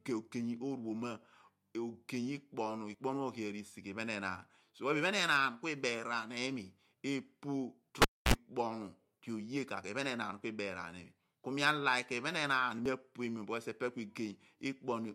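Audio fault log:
2.94 s and 12.86 s, audio missing between chunks: The recording chain likely handles the signal in 5-second blocks and drops a sliver, roughly 40 ms, each time it closes one block and opens the next. Nothing fills the gap, so the sound on either side is butted together. Each point is a sudden skip in the speech, a tiny jump forward rather than a pause, with a hard seam where the two edges meet.
8.02–8.34 s, cable pulled and plugged in: A live connection is broken and then remade. The pull gives a sharp pop, and the signal then falls to near silence for about 270 ms. As the plug goes back in, only the tip touches at first, picking up a burst of 60 Hz mains buzz lasting about 53 ms before full contact. A second pop marks the speech returning.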